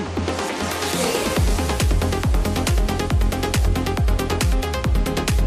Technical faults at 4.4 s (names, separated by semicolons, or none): none